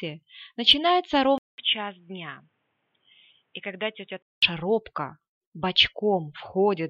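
At 1.38 s a 200 ms gap precedes duller, boxier sound, band-limited near 3.8 kHz and about 5 dB quieter, until 4.42 s: likely the input switched to a poorer device.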